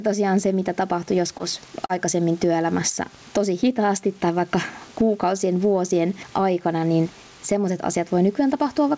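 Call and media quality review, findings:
Gain pumping, throughout. Level swings by around 15 dB. Dynamics squashed. Likely cause: input gain far too high, with a fast limiter or compressor clamping each loud passage.

Short concealed packet loss, 1.38 to 1.42 s. Brief smear in the speech. Jitter buffer/decoder side. About 20 ms of audio arrived too late. Roughly 16 ms was filled by extending the preceding sound, then crossfaded back into real audio.

Short concealed packet loss, 1.86 to 1.91 s. Longer wobble. Same component. About 40 ms missing, about 38 ms synthesized from the last pitch or as shaped noise, then blended out. Short consonants in the gap may be lost.

Room background about 39 dB under speech. Band ends at 8 kHz, which fits a wideband call codec.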